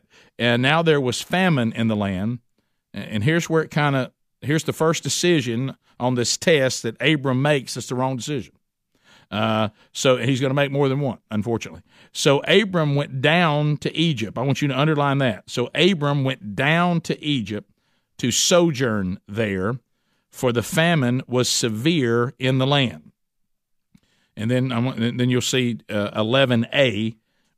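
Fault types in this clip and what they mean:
Nothing stood out on listening to this recording.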